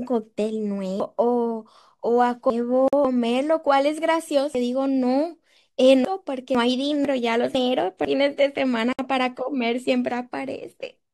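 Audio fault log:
1.0–3.05 s, 4.55–6.55 s and 7.05–8.05 s, chunks out of order: the speech jumps and garbles briefly at the hard joins. A 500 ms chunk plays late, three chunks late in the first two spans and one chunk late in the third, so its neighbours play before it.
2.88 s and 8.93 s, gap at a join of encoded pieces: short silences of 47 ms and 60 ms, six seconds apart, break the speech with smeared edges before it resumes. Separately encoded pieces were joined untrimmed, keeping each run's start-up delay and final-frame padding.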